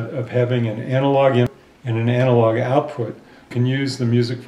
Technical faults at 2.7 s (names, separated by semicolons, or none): none